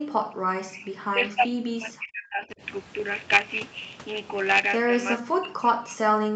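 From 0 to 0.14 s, the background is gated by the echo canceller. The room sound drops by about 40 dB, then returns.

From 0.42 to 2.62 s, and again from 5.17 s to the end, the speech sinks deeply in pieces. This is likely speech suppressed in double talk, with both sides active at once.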